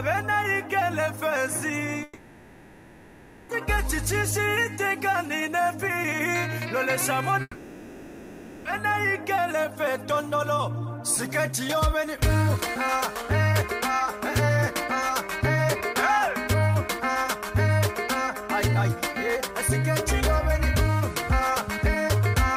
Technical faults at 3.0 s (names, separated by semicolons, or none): long network dropout